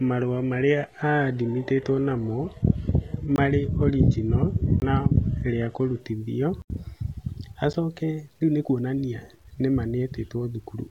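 Speech here, and the first thing you notice is a gritty, grainy edge that tracks the voice the whole way through, roughening the quiet tails and low-level bits, with the error sitting about 40 dB under the signal. That's likely low bit depth without dither, consistent with truncation to around 10 bits. From the start to 6.0 s it's an adaptive stream starting at a low bitrate. The treble is dull and smeared, with stronger codec artefacts, which sounds like a roughly 16 kbit/s HE-AAC start, and nothing gets above 12.3 kHz. At 6.0 s it jumps cleanly, with no gap, to something closer to 96 kbit/s AAC-LC. On top of that there are blocks of digital silence, hard cuts to silence with no fade. The 20 ms gaps at 3.36–3.38 s and 4.80–4.82 s are short holes, the roughly 12 ms one at 7.73 s is barely a hole at all, just a tick, and the 80 ms block at 6.62–6.70 s is a longer dropout, the sort of thing you get when the output buffer isn't filled in time.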